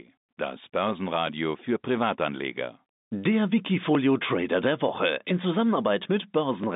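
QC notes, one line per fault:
1.27–6.64 s, clock drift buffer slips: a regular click recurs every 1.34 s, about five in all, heard over the telephone-band speech. The likely cause is two clocks disagreeing by roughly 0.1%, forcing the buffer to drop or repeat a block of around 70 samples each time.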